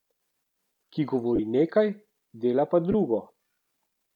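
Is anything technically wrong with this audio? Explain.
Yes, there are two brief dropouts from lost LE Audio frames. The first runs from 1.36 to 1.39 s, about 30 ms, which fits three lost 10 ms frames. The second, just after "dela pa", runs from 2.92 to 2.94 s, about 20 ms, which fits two frames. For each missing frame, the LC3 decoder repeats the last good spectrum with randomised signs, so the speech turns briefly into a rough, noisy smear. On a spectrogram, each gap shows as a short block where the harmonic striations blur into diffuse broadband texture. On the waveform, the periodic cycles give way to noise-like samples of similar level.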